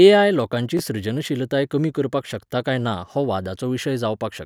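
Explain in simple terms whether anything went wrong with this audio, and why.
Something did go wrong, briefly. Around 0.77 to 0.80 s the speech has chunks out of order: a tiny slice, about 5.8 ms long, plays three slices late. Unlike a dropout, nothing is missing; it's a quick jumbled blip.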